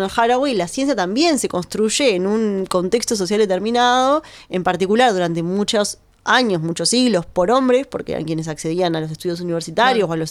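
No technical faults can be heard anywhere in the recording.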